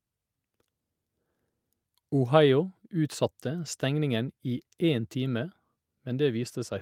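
No technical faults occur at any point in the clip, so there is nothing to describe in time order.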